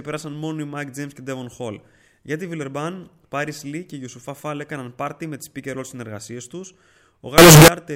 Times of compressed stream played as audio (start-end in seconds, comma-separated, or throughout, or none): none